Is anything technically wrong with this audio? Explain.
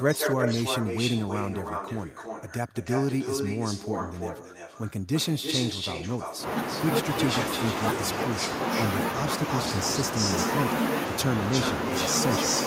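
Yes. From 0 to 6.81 s, 7.22 to 7.76 s, 8.13 to 8.84 s, 9.51 to 10.51 s and 11.51 s to the end, a delayed copy of the speech trails it by 327 to 348 ms, about 5 dB quieter and about as loud in the last stretch. This echo leak is likely a far-end loudspeaker's sound getting past an incomplete echo canceller.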